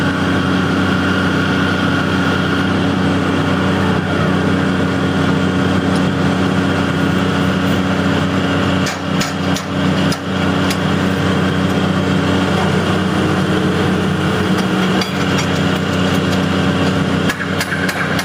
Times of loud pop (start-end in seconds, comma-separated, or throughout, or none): none